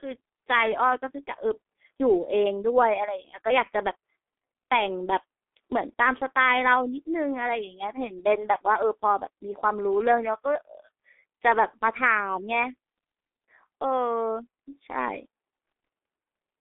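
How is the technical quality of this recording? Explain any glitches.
Technical quality is poor: the whole recording has been through the G.723.1 codec, and it shows from start to finish. The speech is squeezed into a narrow telephone band of roughly 250 Hz to 3.5 kHz, with nothing at all above 3.6 kHz, so it sounds muffled and thin at the bottom. The codec chops audio into 30 ms frames and rebuilds the voice from a slowly updated model at a very low bitrate, something like 6 kbit/s by the sound of it. That leaves the speech hoarse and the consonants smeared together.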